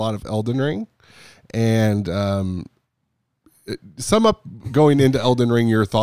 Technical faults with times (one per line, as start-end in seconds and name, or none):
none